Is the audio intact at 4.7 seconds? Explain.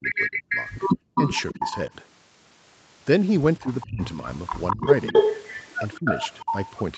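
No. Speech suppressed in double talk affects 3.63 to 4.88 s: the level dips by around 25 dB in pieces, likely because the echo canceller muted speech during overlapping talk. An echo leak runs from 4.5 s to the end: a copy delayed by 206 ms returns at roughly the speech's own level, likely from loudspeaker pickup the canceller missed.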